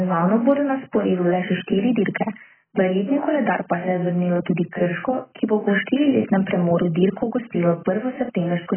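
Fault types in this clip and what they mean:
AAC compression: heavily damaged speech, dull and smeared with nothing above 3.1 kHz, likely from AAC coding at a low bitrate, roughly 10 kbps.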